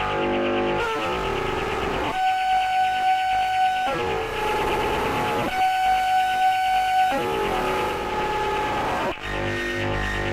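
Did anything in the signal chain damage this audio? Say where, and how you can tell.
Yes. The damage happened at the receiver, where a hybrid radio was blending from digital to analogue. Around 4.11 s the digital stream drops out, and over about 340 ms the set cross-fades to the station's FM broadcast. You can hear hiss come up, sitting roughly 25 dB under the signal, and the level shifts by about 1 dB. At 8.20 s it blends back to digital and the hiss goes away.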